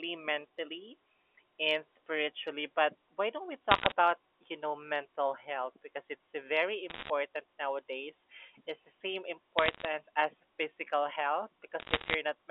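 Telephone speech, band-limited to roughly 300 Hz to 3.4 kHz by G.711 coding, carries four short bursts of crackle from bit errors on a digital phone line, at 3.71–3.92 s, 6.90–7.10 s, 9.58–9.88 s and 11.80–12.14 s. Each flipped bit corrupts one sample, giving sharp ticks at error rates of about 0.4 to 1 percent. Unlike packet loss, the speech between ticks stays intact, with no gaps or smeared repeats.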